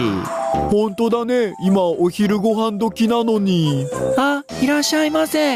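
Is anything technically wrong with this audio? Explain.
Yes. Gain pumping runs throughout, with the gain swinging by about 25 dB. Likely cause is excessive input gain driving a fast limiter, squashing dynamics.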